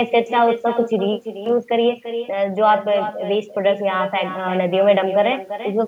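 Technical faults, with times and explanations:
Throughout, echo with no canceller: every phrase is trailed about a third of a second later by a thinner copy around 9 dB quieter, because the far end's loudspeaker feeds its microphone and nothing subtracts that return before it travels back.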